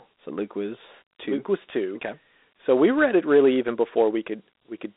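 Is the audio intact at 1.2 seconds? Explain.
No. Dialogic VOX ADPCM coding runs throughout. Coarse 4-bit steps add gritty hiss to the speech, and nothing sounds above about 3.9 kHz, which points to 32 kbps.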